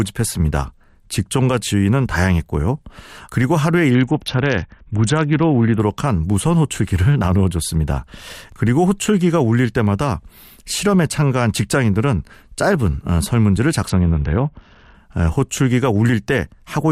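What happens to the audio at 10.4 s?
Nothing goes wrong at 10.4 s: the speech carries straight through that moment with no fault to be heard.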